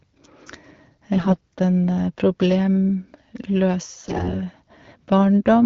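AMR bit errors corrupt the less protected frame bits from 1.14 to 1.38 s and again from 3.99 to 4.34 s, misplacing excitation pulses and skewing pitch, gain and spectral detail. Speech keeps its pitch and level but turns hoarse and gargly, more so in the second burst.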